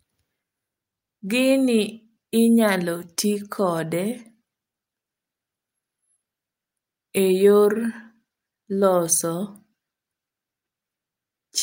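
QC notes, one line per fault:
No faults were heard anywhere in the speech recording. Nothing in it calls for a QC entry.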